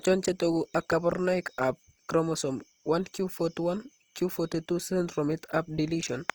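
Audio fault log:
Throughout: Opus compression. The speech sounds plainly rough and grainy, likely from Opus in its CELT music mode at a rate that fits about 24 kbps. Starved bands get refilled with folded or noise content, so tones turn noisy while the bandwidth reaches 20.2 kHz.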